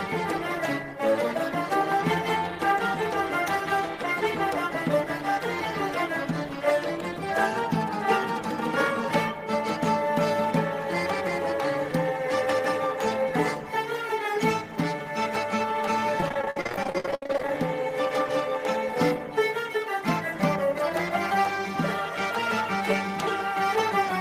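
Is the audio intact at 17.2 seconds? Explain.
No. From 16.20 to 17.55 s the sound turns choppy and robotic: repeated packet loss, with dozens of gaps patched by extending the previous sound, covering about 42% of that stretch.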